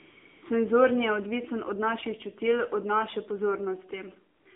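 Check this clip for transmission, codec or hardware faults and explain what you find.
The speech carries two related mobile-network faults: narrowband codec damage throughout, and synthetic fill-in noise at the start and near the end.

AMR narrowband mobile codec, throughout the clip. The voice has been squeezed through a vocal-tract model fed by a handful of pulses per short subframe, at 8 kHz sampling. The line band runs from 250 Hz to 3.6 kHz, so the voice sounds thin and boxy. The damage is plainly audible: a buzzy, synthetic edge that points to one of the lower AMR-NB rates, around 7.4 kbps.

AMR comfort noise, from 0.0 to 0.42 s and again from 4.36 to 4.46 s. During these stretches the handset decided nobody was talking and stopped sending speech frames. The receiver then generated its own noise from a rough description of level and spectrum. Instead of the real background, a smooth, steady hiss fills both gaps and switches in and out at their edges. 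The second patch is brief, about 100 ms.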